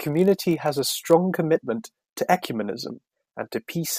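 From 0.0 to 1.15 s, ending just before "commitment to", there is a block size mismatch (padded). One stage delivers blocks shorter than the next stage reads, which fits a 1024-sample read, and zeros fill each remainder. Those regular gaps form a buzz near 46.9 Hz. The speech keeps its normal pitch, with almost no slowing.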